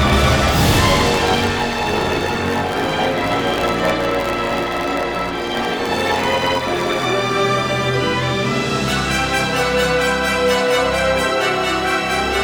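A block size mismatch (truncated) runs from 0 to 7.05 s: block tails are discarded, giving a 91.9 Hz buzz and audio running 1.07 times fast with unchanged timbre, which fits 512-sample blocks. Unlike a sample-rate error, the speed-up leaves timbre intact.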